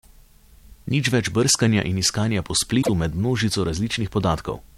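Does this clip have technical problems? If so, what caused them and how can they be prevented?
Yes. From 2.81 to 2.89 s the speech jumps ahead with a short glitch. The likely cause is a broken MP3 bit reservoir: frames were lost, so following frames, each about 26 ms, decoded borrowed bytes wrongly. Cut or splice MP3 streams only at frame boundaries that preserve reservoir data.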